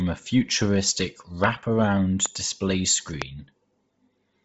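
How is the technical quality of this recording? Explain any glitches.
The speech has two problems: a heavily coded, band-limited sound all the way through, and three loud pops in the middle.

The whole clip sounds like Bluetooth LC3 compression, likely from an LE Audio link. Nothing gets through above about 7.7 kHz, and the top of the voice has a breathy, grainy edge. That happens when a transform codec is short of bits. It throws away most of the upper spectrum and patches the gaps with noise. The damage is heavy, which fits a low bitrate around 24 kbps with short 7.5 ms frames.

There are three loud pops, at 1.44–1.46 s, 2.26–2.28 s and 3.22–3.24 s. The first one lands right after "a futuristic". Each is a single sharp crack. The first and third peak at something like 20 dB above the speech, and the middle one is a little softer. The speech carries on underneath each time. They're most likely sudden voltage spikes, from a connector, a switch, static or a driver hiccup, getting added straight into the signal.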